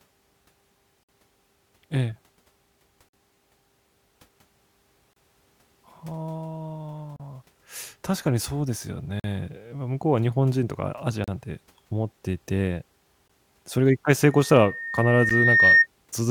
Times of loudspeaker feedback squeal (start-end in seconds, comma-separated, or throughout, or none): 14.30-15.87